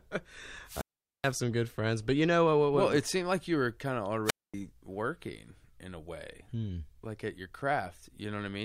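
Wireless microphone squelch dropout hits twice, from 0.65 to 1.34 s and from 4.25 to 4.54 s: the radio link fades, the receiver's squelch mutes, leaving holes of 430 and 236 ms.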